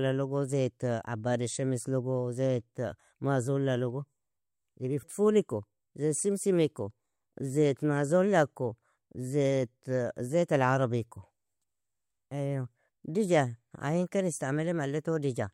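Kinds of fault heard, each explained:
No technical faults can be heard in this recording.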